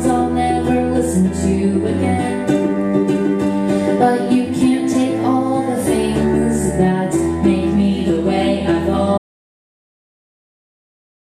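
The input feed was likely lost at 9.18 s, through a dropped connection or an accidental mute, while recording carried on writing silence. This audio dropout to silence cuts the sound off abruptly and leaves dead, toneless silence for the final 2.1 s.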